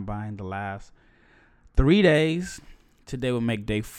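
Speech that sounds dull and muffled from 0.0 to 2.14 s because de-emphasis was applied wrongly: a treble cut applied where no pre-emphasis existed or applied twice, rolling highs off smoothly to about 10 dB down at 10 kHz. A spectrogram shows dimmed upper bands across that stretch.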